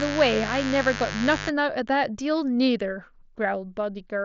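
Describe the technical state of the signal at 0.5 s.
At 0.5 s the speech sits under mains buzz, which runs from the start of the clip to 1.5 s. Sharp switching spikes leak in twice per 50 Hz cycle, so the interference carries a dense ladder of harmonics rather than a single low tone. That makes it a raspy, edgy buzz, fairly loud relative to the speech, unlike smooth mains hum. Because of the headset path, its harmonics stop around 7.6 kHz along with everything else.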